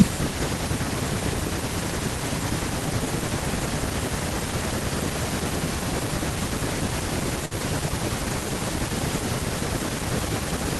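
At 7.45–7.54 s, a burst of packet loss leaves 53 ms of held, fading sound, then a jump past 60 ms of missing speech. On a spectrogram this appears as smeared, decaying bands ending abruptly.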